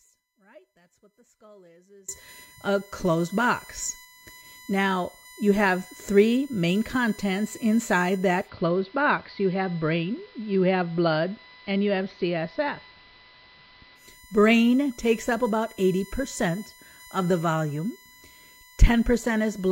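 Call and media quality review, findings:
USB whine, whole clip. USB bus current in 1 ms frames leaking via power or ground into the speech path. Fixed-pitch whine on a 1 kHz fundamental, strongest at its 2 kHz harmonic, about 25 dB below the speech.

Audio dropout to a faint residue, already under way at 0 s, ends 2.09 s, before "a closed box". Likely a lost input upstream with the later path still live. Speech absent; only faint sound about 30 dB down, then an abrupt return.

Digital radio blending to analogue, 8.4 s to 14.05 s, just after "three main contents inside". Hybrid receiver loses the digital stream, cross-fades over 100 ms to AM. Level down about 1 dB, hiss about 30 dB below speech.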